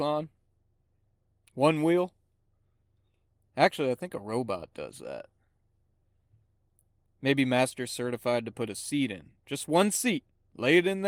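No technical faults can be heard in this speech.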